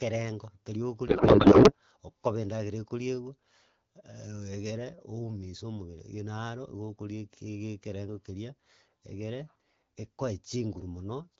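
A codec payload misread hits this speech clip from 1.07 to 1.75 s: octet-aligned AMR frames are being parsed as bandwidth-efficient, so every field lands in the wrong bits. The decoder turns the speech into garbled noise and warble that barely tracks it, before the HD Voice stream, which points to AMR-WB at around 12.65 kbit/s, comes back clear.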